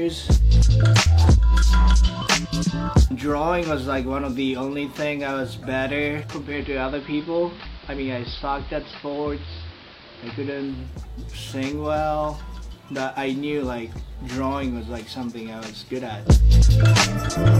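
Digital radio blending to analogue from 6.27 to 11.0 s: a 380 ms cross-fade to AM adds hiss and lowers the level about 1 dB.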